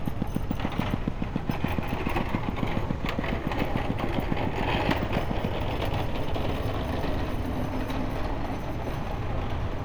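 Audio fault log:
0.08–5.46 s, train of clicks: likely interference from nearby equipment or a faulty connection injecting a pulse about seven times a second, evenly spaced, some forty in all. Each click peaks roughly 15 dB above the sound, heard as steady ticking over it and through the pauses.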